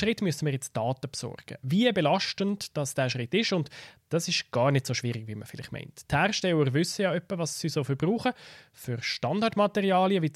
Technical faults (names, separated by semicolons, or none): none